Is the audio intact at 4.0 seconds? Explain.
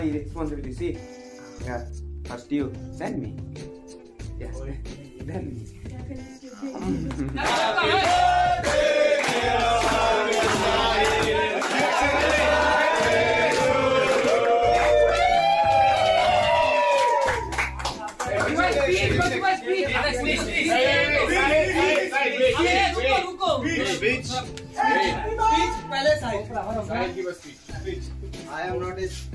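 Yes, the audio is intact at 4.0 seconds, with no fault audible at that moment.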